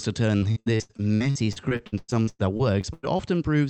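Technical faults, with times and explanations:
0.37–3.21 s, repeated packet loss (robotic sound): around twenty dropouts of up to 100 ms, each patched by stretching the last sound, so about a third of this span is filled-in tone. Unlike a single dropout, this gives continuous choppy speech over the 8 kHz-limited Opus call path.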